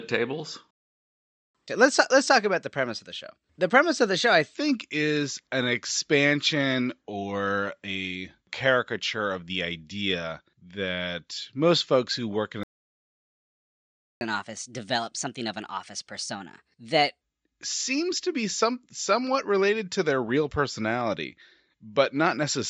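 The player most likely ran short of data or had its thread blocked at 0.71 s. This playback stall cuts the speech off mid-flow into about 0.84 s of silence until 1.55 s. Once data flows again, the player works off its backlog by resampling, causing a catch-up at higher speed. From 1.55 to 4.55 s the speech runs at 1.1 times normal speed, lifted by about a semitone and a half, then settles back.

A second, longer stall follows, likely from the same starvation or blocking. The sound drops out at 12.63 s and stays silent for about 1.58 s until 14.21 s. Because more time was lost, the recovery is harsher. From 14.21 to 17.21 s playback runs at 1.25 times speed, pitched up by roughly four semitones, giving a hurried, higher-pitched stretch before returning to normal. Throughout, the call microphone processing trims the lowest bass.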